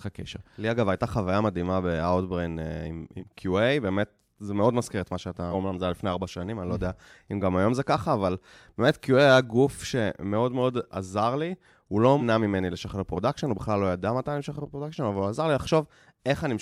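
At 3.18, 5.51 and 12.19 s the speech jumps ahead where compressed frames were skipped, roughly a fifth, two fifths and 0.15 of a second gone, in steps of the 46.4 ms frame.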